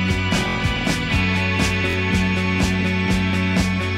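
Two short stutters, at 0.49 to 0.56 s and 1.90 to 1.95 s, where one 23 ms piece of sound repeats with hard joins: a repeated buffer, consistent with a 1024-sample buffer replayed when new audio arrived late.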